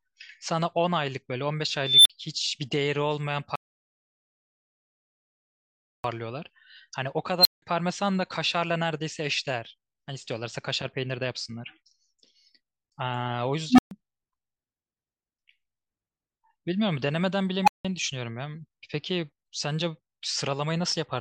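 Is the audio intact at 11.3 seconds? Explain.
Yes, the speech runs through 11.3 seconds intact, with no dropout, click or other fault at that moment.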